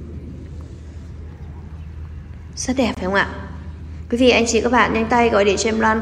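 At 2.95 s the sound cuts out for about 20 ms, ending at 2.97 s, then picks up further along as if it had kept playing underneath. That's a Bluetooth dropout, likely one audio packet that reached the headphones too late and was discarded.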